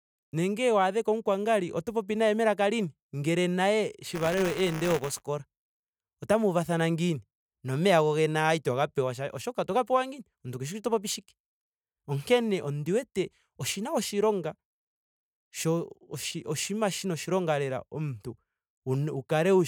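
From 4.05 to 5.22 s, buffer tearing splices a sliver of slightly older audio into each period, giving a robotic 188 Hz rattle with evenly spaced vertical stripes on the spectrogram.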